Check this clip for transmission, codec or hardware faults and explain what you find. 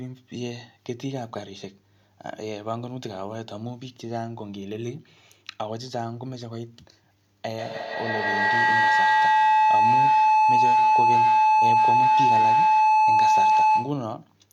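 One fault is present: a feedback howl in the second half of the speech.

From 7.54 s to 14.18 s, a tone of roughly 1 kHz swells, with repeats around 150 ms apart, and peaks about 12 dB above the speech. This is feedback howl. Two devices in the same room are on one call, so sound travels from a microphone to a loudspeaker and back again, gaining level each pass. The loop favours frequencies near 1 kHz, so each repeat grows and narrows toward that tone until the loop is broken at 14.18 s.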